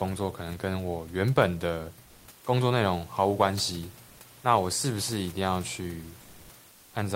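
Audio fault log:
2.07–2.27 s, 4.07–4.19 s, 6.23–6.47 s and 6.71–6.91 s: comfort noise in place of the background. The real room background, about 30 dB below the speech, turns into a smooth, featureless hiss at nearly the same level. The sender likely stopped transmitting during pauses, as Opus DTX does, so the receiver filled them with synthetic noise.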